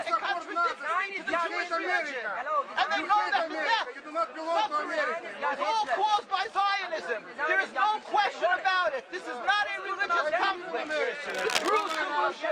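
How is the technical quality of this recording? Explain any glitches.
One glitch stands out, near the end. Cable scratch noise runs from 11.29 to 11.97 s, likely from a worn cable or connector being moved so its contact resistance jumped about rapidly. It adds dense, uneven bursts of scratchy rustling, nearly as loud as the sound itself.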